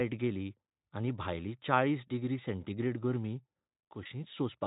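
At 2.07 to 2.11 s, between "गेली आनी भायली चाळीस" and "डिग्री सेंटीग्रेड गर्मी", the speech shows VoIP packet loss concealed by the speech codec. The Speex decoder bridges the gap by extending its last pitch and filter, which fits a single lost 20 ms frame. The result is a brief stretched smear with the level sagging before normal speech resumes.

From 3.80 to 4.27 s, after "चाळीस डिग्री सेंटीग्रेड गर्मी", there is a sudden gain jump. Speech and background noise drop together by about 6 dB and then step back up, likely from a gain change applied without a ramp. Within this quieter stretch, at 4.03 to 4.06 s, a second concealed packet loss of about 20 ms produces the same short, fading extrapolation.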